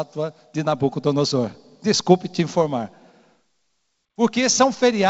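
Nothing technically wrong can be heard in this short speech recording. It has passed through G.722 wideband telephone coding at 64 kbit/s, which keeps the speech band open up to about 7 kHz, with any trace of the codec at most faint.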